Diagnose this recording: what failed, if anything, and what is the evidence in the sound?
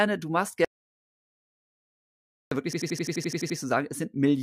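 The speech cuts out abruptly at 0.65 s and returns at 2.51 s, leaving about 1.87 s of dead digital silence with no room tone beneath it. This is an audio dropout to silence, likely from the input link or device failing while the recorder kept writing zeros.

From 2.73 to 3.58 s, an 85 ms fragment repeats exactly about ten times, a machine-gun stutter at 11.7 Hz. This system hang loop points to a frozen driver or buffer stage, with the hardware replaying one 4096-sample ring buffer until the system recovered.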